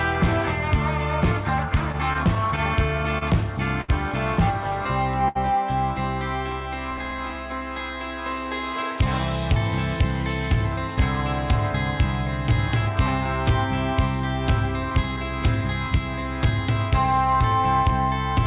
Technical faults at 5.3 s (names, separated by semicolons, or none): short stall from a late packet